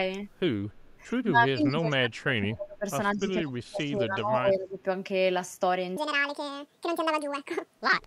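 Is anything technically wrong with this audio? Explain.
Yes, there are three kinds of fault.

From 0.72 to 0.91 s, a very faint delayed copy of the speech trails it by 184 ms. This is likely an echo leak from a far-end loudspeaker that the echo canceller did not fully remove.

From 1.27 to 2.85 s and from 3.15 to 4.8 s, the speech dips, sinking by up to about 30 dB and about 25 dB. That is likely speech suppressed in double talk: the echo canceller mistook overlapping talk for echo and turned it down.

From 5.97 s to the end, the speech turns hurried and squeaky, running 1.67 times too fast and nearly ten semitones high. This section at the wrong speed is likely from being played against the wrong clock.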